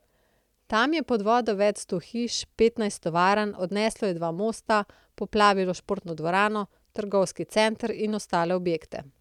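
No technical faults can be heard anywhere in the speech recording; the signal stays intact and steady throughout.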